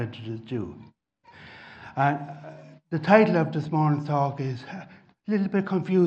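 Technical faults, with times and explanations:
Throughout: MP2 compression, dull and gurgling with granular distortion as upper bands flicker out, likely from a low bitrate around 80 kbps starving the sub-bands.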